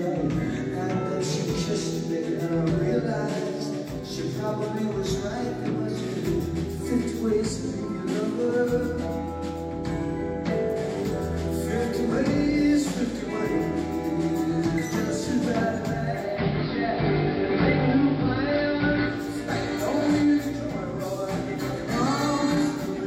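At 16.12 s there's digital radio blending to analogue: the receiver lost the digital stream and cross-faded over about 318 ms to the AM feed. Hiss rises to around 25 dB under the signal, level shifts about 3 dB, then it returns at 19.36 s.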